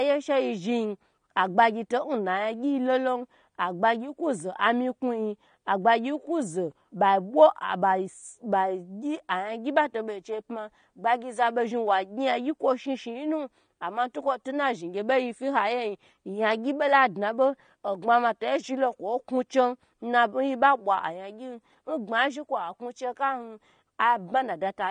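Speech, and the whole thing carries plainly audible AAC compression: it sounds dull and smeared, with a warbly, fizzy edge on sibilants and held vowels, and nothing above 19.5 kHz. That's likely a low-bitrate AAC-LC encode, something around 32 kbps, starving the spectrum.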